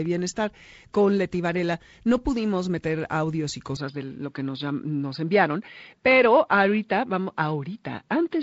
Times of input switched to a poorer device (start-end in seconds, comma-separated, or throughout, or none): 3.77-8.42